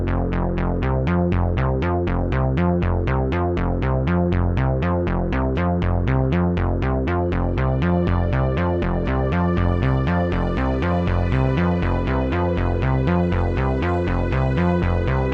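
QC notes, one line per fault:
No faults heard anywhere in this recording of sounds. Nothing here needs a QC entry.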